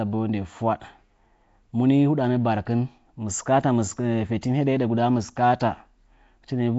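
Speech throughout with a rough, hissy halo, a smeared underwater quality and nothing above 7.7 kHz, likely Nellymoser compression at a low rate that fits about 32 kbps.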